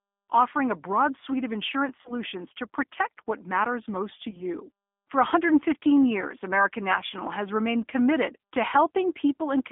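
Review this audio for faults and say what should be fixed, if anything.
The speech sounds narrow and slightly rough and synthetic throughout, with plainly audible codec damage and a band running from about 250 Hz to 3.5 kHz. This is the G.729 codec at 8 kbit/s, which rebuilds speech from a vocal-tract filter and a few pitch-driven pulses.

Three brief smeared dropouts fade and leave the voice weak for a moment: at 2.02–2.13 s, between "broad suite of insurance" and "to protect what matters"; at 4.30–4.42 s, just after "what matters most to"; and at 7.07–7.12 s, just before "has remained committed to". This is VoIP packet loss concealed by the speech codec. Each gap of about 30 ms fits one lost packet, and the decoder extrapolated from its last pitch and filter, so the damage outlasts the gap itself.

Prevention would mean using a wideband codec with a jitter buffer and forward error correction on a network with less packet loss.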